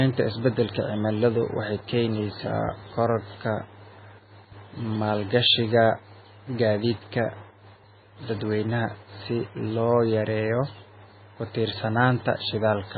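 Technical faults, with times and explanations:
Throughout, MP3 compression: nothing above 4.6 kHz, and weak bands flicker frame to frame into a watery swirl that a plain low-pass lacks, likely from a bitrate near 16 kbps.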